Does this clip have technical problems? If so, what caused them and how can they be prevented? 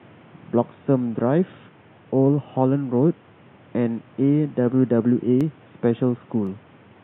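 Yes. Two sharp clicks, at 5.41 s and 6.47 s, are most likely dropped samples: a fraction of a millisecond of the stream goes missing, so the waveform jumps straight from one value to a later one. On a waveform each shows as a sudden step; on a spectrogram, a thin vertical line across all frequencies, standing out against room noise about 30 dB below the speech. Preventing it means giving the capture and playback chain enough buffer headroom and CPU priority that no samples are skipped.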